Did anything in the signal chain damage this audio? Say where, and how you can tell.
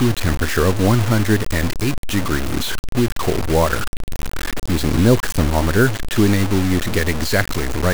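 Yes. Throughout the speech, grainy distortion rides on every sound, only about 10 dB below the signal, and tracks it rather than sitting as steady hiss. This is low bit depth without dither, likely from a sample-format conversion truncating to about 4 bits, where error follows the signal.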